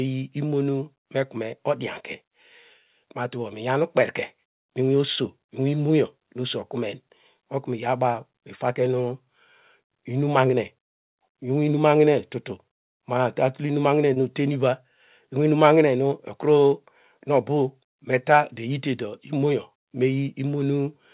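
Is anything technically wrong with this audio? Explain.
Yes. Twice, at 8.12 s just after "okunen otnu" and at 14.14 s just after "tul inum mahine", there is short concealed packet loss: about 20 ms of audio arrived too late, so the receiver extended the preceding sound and blended it back, heard as a brief smear or wobble. The call path's narrow band, with nothing above 4 kHz, fits a G.711 mu-law codec.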